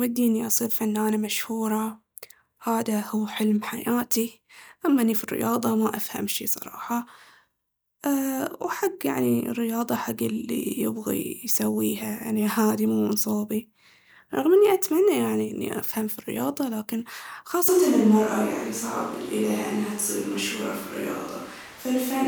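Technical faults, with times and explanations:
17.69 s to the end: switch to a distant microphone. The speech turns roomy and hollow with thinner bass, and room noise rises to about 20 dB below it while the level holds. Unlike added reverb, it is a sudden cut, likely from a farther microphone taking over.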